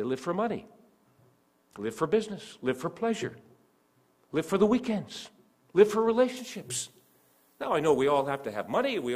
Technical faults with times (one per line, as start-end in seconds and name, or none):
6.37-9.15 pre-emphasis left on